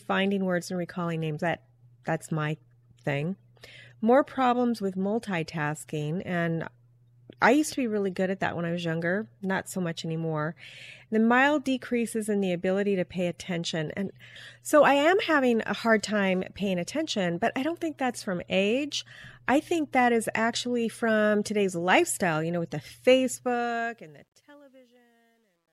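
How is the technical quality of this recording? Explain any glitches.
The recording has one glitch: truncation distortion on the fade at the very end. From 23.29 s to 25.73 s, as the sound fades out, the tail grows gritty instead of simply getting quieter. The fade was computed with too few bits and no dither, which points to roughly an 11-bit word length. Near the bottom of the fade the waveform collapses into coarse square steps. It is worst from 24.32 s to 25.73 s. Unlike a noise gate's chatter, the roughness follows the falling level itself and worsens steadily as the fade gets quieter.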